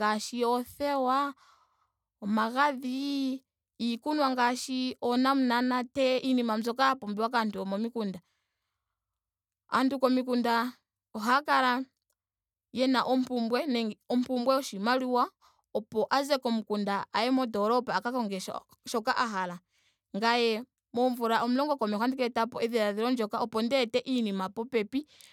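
Listening to the speech from beginning to end, nothing stood out as a technical fault at any point.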